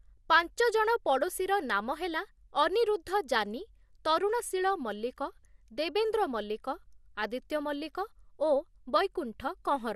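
From start to finish the speech is dull and carries a gurgling, granular grit, which points to MP2 compression as the likely cause, at a rate that fits roughly 80 kbps. The encoder divides the signal into 32 sub-bands and rations bits among them. At this rate it cannot feed the upper bands, so they drop out or flicker in and out. The bands that remain are coarsely quantised, which produces the grainy distortion.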